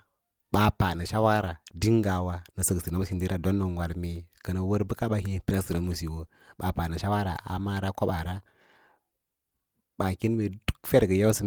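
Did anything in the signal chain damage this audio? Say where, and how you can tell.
No, nothing in the signal chain left an audible mark on this speech, and the recording keeps a steady, continuous signal at a consistent level with no breaks, stray noise or alteration anywhere in it.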